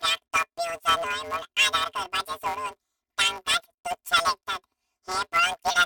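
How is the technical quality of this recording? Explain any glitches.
The speech has a robotic buzz throughout, with no clear octave shift. This is planar audio read as interleaved. Each block of about 5.8 ms, which fits a 256-sample block, holds all left samples then all right, yet is read as alternating pairs. Each block plays twice at double speed, and the repeats impose a buzz at 172 Hz.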